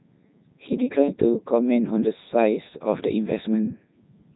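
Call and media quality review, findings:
Codec 2 vocoder, whole clip: robotic, buzzy speech with heavy damage and nothing above 3.9 kHz, consistent with the 3.2 kbit/s mode. Decoder rebuilds voice from sine waves using only sent pitch, voicing, energy and envelope, so the original waveform is lost.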